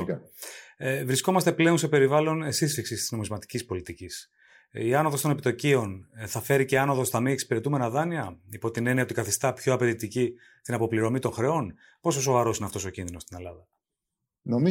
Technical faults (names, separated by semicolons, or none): none